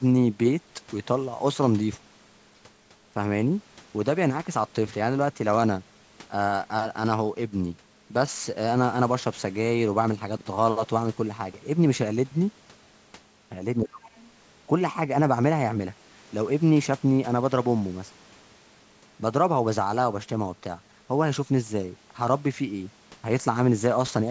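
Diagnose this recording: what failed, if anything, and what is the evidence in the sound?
Speech suppressed in double talk, in the call processing stage: from 13.83 to 14.12 s the speech dips by roughly 25 dB for about 0.3 s. The likely cause is the echo canceller mistaking overlapping far-end speech for echo and ducking the microphone. A dropout would cut to silence, not dip.

The other side's voice leaking through, also call processing: from 14.09 to 14.31 s a faint second voice sits roughly 30 dB under the talker, likely residual loudspeaker echo the canceller failed to subtract. Unlike crosstalk, it shares the band-limited call sound, with nothing above 8 kHz.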